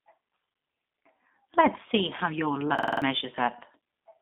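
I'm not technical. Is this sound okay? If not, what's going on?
No. The whole clip has gone through the G.729 codec, a low-data phone-call format that rebuilds speech from a simplified model of the voice. Everything above about 3.7 kHz is missing, so the speech sounds muffled, rough and a bit robotic.

There's also a system hang loop from 2.79 to 3.02 s, just after "see how your". The computer briefly froze while the sound hardware kept replaying the same 46 ms scrap, five times over, at about 21 repeats a second. That makes a quick stutter, and about a fifth of a second of real audio is lost.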